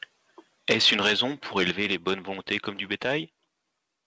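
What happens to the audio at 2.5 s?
A harsh, crackling edge appears on the loudest syllable between 2.5 and 2.56 s, where the tops of the waveform sound flattened rather than rounded. This is microphone overload, likely caused by the input level being set too high, so the peaks ran about 6 dB past the converter's limit and were sheared off. Only a small share of samples, roughly 3 percent, is clipped, which keeps the distortion brief and concentrated on that peak.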